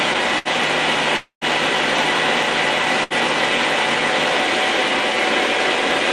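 A burst of packet loss hits at 0.38 s: the receiver stretches the last sound into a fading smear for about 66 ms, then skips ahead roughly 60 ms. From 1.17 to 1.44 s the sound trails off into a fading buzz or hiss, drops to silence for about 100 ms, and returns 240 ms further on, likely a long network dropout. At 3.03 s there's another burst, about 70 ms of concealment and 60 ms gone.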